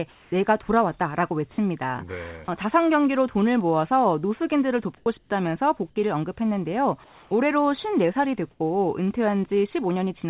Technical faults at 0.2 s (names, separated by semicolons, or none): comfort noise in place of the background